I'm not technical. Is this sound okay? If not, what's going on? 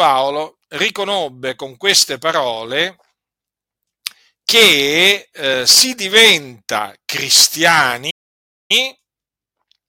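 No. There's a playback stall: at 8.10 s the speech goes silent for about 0.59 s, resuming at 8.71 s. It's a clean pause, not a crackle, likely from the player briefly running out of data.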